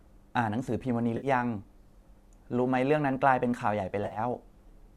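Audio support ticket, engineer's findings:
AAC frame loss with concealment, 1.17–1.27 s. Smeared, noisy patch of about 60 ms. Decoder refilling from the last good spectrum. Gap fits several short low-delay frames dropped in transit.

Second event, 4.04–4.19 s. About 80 ms lost, scattered over 120 ms. Longest run about 50 ms. Heard as phasey patches, not one clean dropout. Same concealment at work. Probable component: packet path to the decoder. Stream likely AAC-ELD at 64 kbps, with light codec grain.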